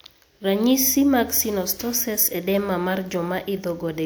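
No technical faults are audible.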